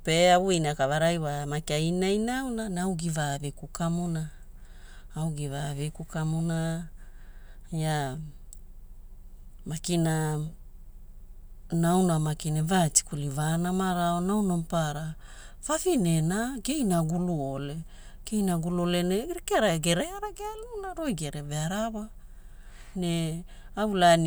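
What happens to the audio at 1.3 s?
Nothing goes wrong at 1.3 s; the speech there plays through cleanly, with no dropout, click or distortion.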